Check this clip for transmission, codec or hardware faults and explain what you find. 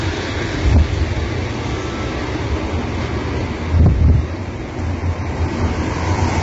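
Two faults stand out: a codec fault running through the whole recording and two short bursts of overload.

Throughout, the sound is rough and grainy, with noise filling the gaps between tonal components and nothing above 7.8 kHz. The likely cause is heavy low-delay AAC compression (AAC-ELD), whose short frames resolve tonal detail poorly at a rate that fits about 16 kbps. On a spectrogram, a hard ceiling appears at 7.8 kHz, with smeared, noisy bands.

Hard clipping occurs from 0.65 to 0.82 s and again from 3.77 to 4.16 s, where the level overshoots the available range by about 11 dB and about 12 dB. The peaks are cut flat, adding harsh high harmonics heard as fuzz. The waveform shows squared-off tops, and the spectrogram shows broadband vertical smears.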